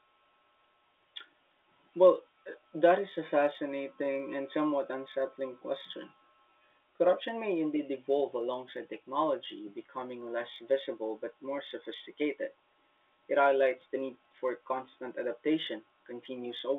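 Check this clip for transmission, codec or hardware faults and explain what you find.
One fault runs through the clip: clock slip clicks from 0.11 to 16.78 s. The cause is likely two unsynchronised clocks about 1000 ppm apart, so single samples slip roughly every 20 ms, giving a soft rattle over the speech under its G.711 telephone band.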